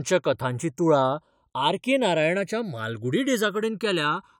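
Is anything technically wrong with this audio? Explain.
Yes. Throughout the speech there is a slow, swirling flanging that shifts as the clip goes on. This is channels drifting apart: the left and right signals were captured on devices running from separate clocks that disagree by a couple of hundred parts per million. The delay between them therefore grows steadily, reaching somewhere under a millisecond by the end. When the channels combine, the comb-filter notches glide through the spectrum, producing that moving, hollow colour.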